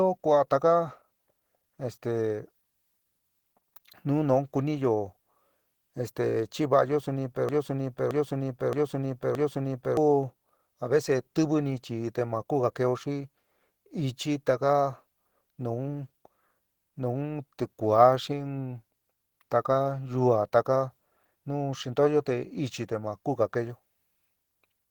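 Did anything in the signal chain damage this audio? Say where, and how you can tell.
Yes. At the codec stage, the speech sounds hoarse, grainy and muffled throughout, likely Opus compression in its hybrid speech mode at a bitrate near 16 kbps.

At the playback or stream buffer, a broken-record loop runs from 7.49 to 9.97 s. A 0.62 s fragment repeats exactly four times, likely as the stalled buffer resends it, replacing the audio that should have played.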